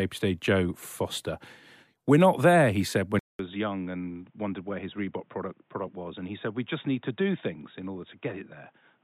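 Input switched to a poorer device at 3.19 s, after "there he said when". Following a 0.2 s gap, the speech turns dull and boxy to the end, cut off above 3.8 kHz, about 10 dB quieter, with faint new hiss, likely from a narrower-band microphone.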